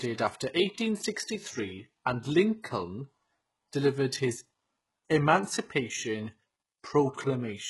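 Speech throughout shows heavy HE-AAC compression damage: s sounds come out gritty and metallic because the treble is likely rebuilt by spectral band replication at a rate near 12 kbps. A spectrogram shows blocky, smeared upper bands copied from below, with nothing above 11.5 kHz.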